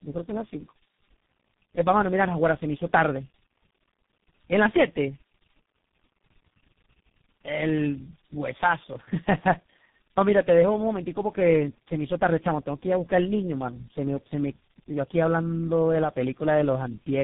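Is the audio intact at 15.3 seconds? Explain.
No. At 15.3 seconds, as throughout, the speech sounds rough, muffled and warbly, with nothing above 3.8 kHz. This is tandem speech coding: GSM full rate, then G.726 at 24 kbit/s, then G.723.1 at 6.3 kbit/s, each re-encoding the last one's degraded output.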